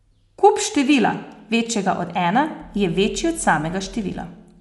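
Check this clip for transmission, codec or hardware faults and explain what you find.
There's one fault, running through the whole speech clip: likely Dolby Digital compression at a low rate, with a bitrate around 64 kbps. Nothing comes through above 11.5 kHz, so it sounds dull, and with many frequency lines starved of bits and filled with dither noise, the voice carries a clearly audible rough, fluttering grain.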